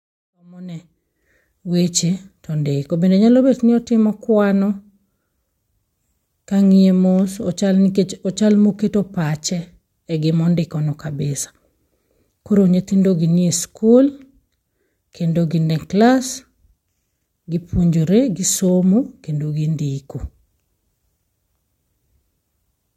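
The speech clip has no technical fault to report. It opens with a smooth fade-in, rising from about half a second and reaching full level by 1.66 s with no click or hard edge.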